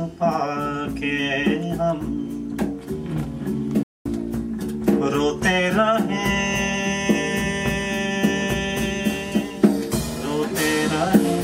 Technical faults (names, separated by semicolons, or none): playback stall